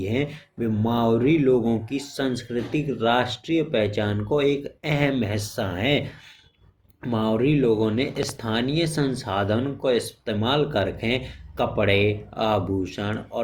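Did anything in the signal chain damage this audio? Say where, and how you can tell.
Yes. A loud pop occurs as two sharp pops between 8.23 and 8.31 s, after "मावरी लोगों ने" and before "संसाधन को इस्तेमाल कर". They peak roughly 10 dB above the speech, which continues underneath. A voltage step in the analogue wiring, likely a plug or switch, caused it.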